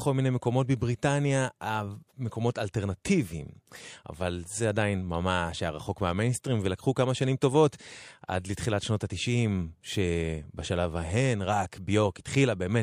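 No technical faults occur at any point in time, so there are none to describe.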